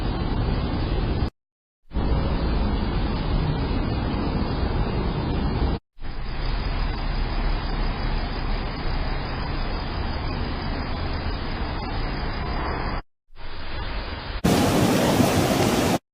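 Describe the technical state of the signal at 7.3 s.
At 7.3 s the signal is inside a jitter buffer speed-up that runs from 5.64 s to 8.00 s. The receiver's buffer had built up more audio than its target, so it is shedding the excess by cutting out short segments of one or a few pitch periods in quick succession, removing roughly 70 ms in total. Playback runs at about 103% speed with pitch unchanged.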